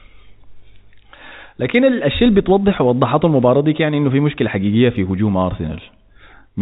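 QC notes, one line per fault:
No faults heard in this speech clip.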